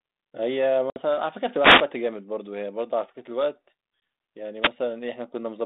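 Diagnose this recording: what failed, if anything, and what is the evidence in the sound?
Packet loss on an ADPCM call, at the network stage: two hard-edged silent holes, one at 0.90 s lasting 60 ms (about three packets) and one at 4.00 s lasting 20 ms (a single packet). The sound then returns slightly distorted while the decoder's predictor and step size re-converge. Because the gap is true silence, it cannot be a radio fade.

Wireless microphone noise hit, in the analogue FM radio link ahead of the phone: bursts of swishing static from 1.56 to 1.89 s and 4.61 to 4.70 s. Reflections cancel the carrier, and the receiver's noise rises over the sound. Unlike packet loss, the dropout is filled with noise rather than emptied.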